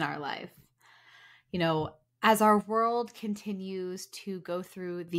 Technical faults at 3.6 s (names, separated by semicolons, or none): sudden gain jump